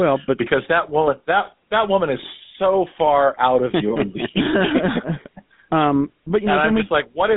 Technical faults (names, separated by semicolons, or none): GSM full-rate codec